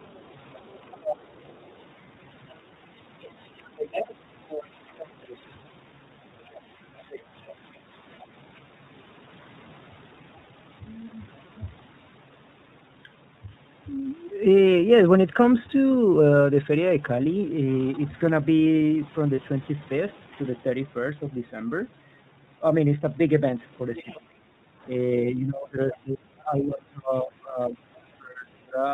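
Speech coded with the iLBC codec at 13.33 kbps in 30 ms frames throws away everything above 4 kHz, leaving the voice narrowband and a little rough and synthetic throughout. Sample clock jitter of roughly 2 µs adds a faint hiss, about 45 dB down, that thickens on loud, bright passages and disappears in pauses. From 6.42 to 8.17 s, 23.96 to 24.2 s and at 25.91 s, the other side's voice leaks through, most likely from a loudspeaker the echo canceller failed to cancel, heard as a second voice around 25, 20 and 15 dB below the talker. The same canceller, likely confused by both sides talking at once, suppresses the speech in double talk: a brief dip of roughly 10 dB at 7.87 to 7.92 s, then, from 24.03 to 28.85 s, deep cuts of up to roughly 30 dB adding up to about 3 s. Between 24.64 and 24.83 s the echo canceller gates the background, so the room tone drops by about 10 dB for some 200 ms before returning. 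One lost iLBC frame at 19.35 to 19.39 s is concealed by the decoder repeating the last pitch cycle for 30 ms, giving a short buzzy, held sound before the voice recovers immediately.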